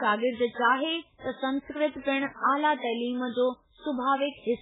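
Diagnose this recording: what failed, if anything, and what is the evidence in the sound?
The codec stage is at fault, likely heavy MP3 compression. Throughout the speech there is nothing above 3.8 kHz, and weak spectral detail flickers in and out, giving a watery, swirling texture. That pattern fits a very low bitrate of about 8 kbps, which starves the encoder of bits.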